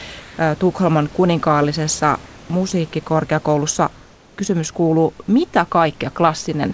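From 0.20 to 0.38 s, a span of 180 ms, the real background is replaced by a steady, featureless hiss about 2 dB quieter than the surrounding room noise, which sits about 24 dB below the loudest speech. This is comfort noise in place of the background. The likely cause is discontinuous transmission: the sender stopped sending during a pause, and the receiver filled it with synthetic noise roughly matched to the background's spectrum.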